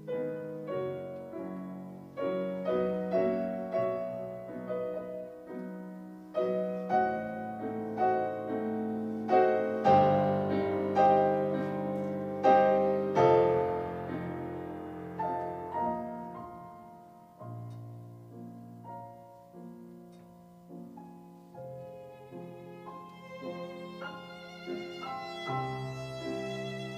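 Current drawn by a USB bus in 1 ms frames is leaking into the audio path through power or ground, causing USB whine that runs throughout the clip: a steady, fixed-pitch tone at 1 kHz, sitting roughly 40 dB below the sound.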